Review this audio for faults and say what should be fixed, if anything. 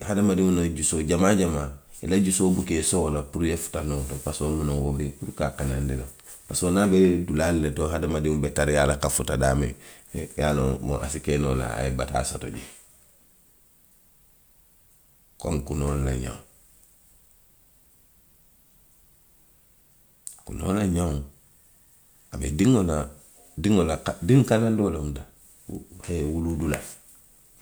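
No faults found in this speech; nothing needs fixing.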